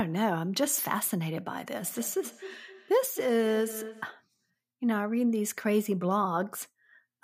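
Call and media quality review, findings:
Feedback echo between two devices, 1.85 s to 4.21 s. Speech returns at a steady interval of roughly a third of a second. Repeats peak at about 13 dB below the direct speech. Probable component: a second device in the same room on this call. Its speaker plays what this device's microphone sent, and that microphone recaptures it. Each device's echo canceller only removes its own playback, so the acoustic loop between them goes uncancelled.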